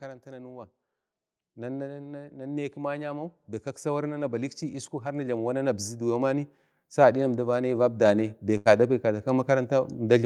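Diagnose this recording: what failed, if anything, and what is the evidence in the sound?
Automatic gain rising in the call-processing stage: from 1.54 s to the end, the speech and the background noise swell together. The gain control judged the input too quiet and kept turning it up step by step, lifting everything in the signal rather than the talker alone. On a waveform the envelope widens steadily across those seconds. On a spectrogram the noise floor between phrases brightens at the same pace as the speech.

A burst of packet loss on the network path hits at 8.57 to 8.67 s. For about 79 ms the receiver had no fresh audio, so its concealment stretched the last received sound into a held, fading buzz or hiss lasting roughly 79 ms. Speech then resumes further along, with about 80 ms of material in between gone. A spectrogram shows smeared horizontal bands where fine detail should be, followed by an abrupt jump in content. 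The waveform shows a decaying repetitive pattern.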